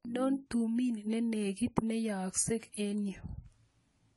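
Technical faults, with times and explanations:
Throughout, AAC compression: the speech sounds dull, with nothing above 11.4 kHz and a smeared, warbly texture on sibilants. This likely comes from low-bitrate AAC-LC, around 32 kbps.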